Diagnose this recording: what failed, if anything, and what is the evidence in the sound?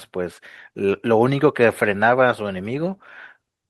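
Nothing failed; no faults heard.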